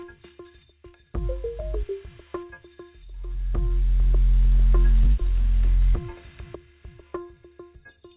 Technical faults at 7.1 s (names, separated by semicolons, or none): none